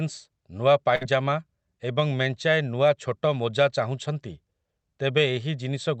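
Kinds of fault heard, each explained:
Burst of packet loss: Around 0.95 to 1.03 s a short run of the speech stream never arrived, so the receiver kept the last sound going for about 56 ms, letting it fade, then picked up roughly 60 ms further along with that stretch gone. On a waveform this shows as a decaying, overly regular patch before an abrupt restart. On a spectrogram it appears as smeared, fading bands under the Opus band edge near 8 kHz, then a hard cut.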